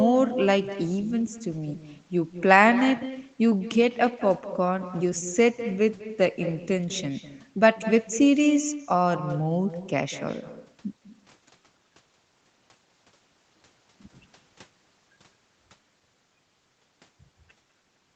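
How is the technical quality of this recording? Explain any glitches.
The recording carries one clear fault, an echo with no canceller, audible from start to finish. Each phrase is followed about a fifth of a second later by a copy about 13 dB quieter and thinner. The far end is playing the call through a loudspeaker, its microphone picks that up, and nothing strips it out, so the voice returns after a full network round trip. Room reverberation would blur the sound into a smooth tail. Here the copy is a distinct repeat at a fixed delay. Nothing is heard above 8 kHz, which fits a narrowed Opus call path.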